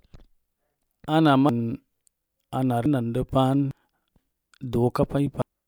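Compressed frames are skipped at 1.49, 2.86, 3.71 and 5.42 s. Whole coded frames, which fit a length of about 85 ms, are missing or rejected, so the speech jumps ahead by roughly half a second to a second each time.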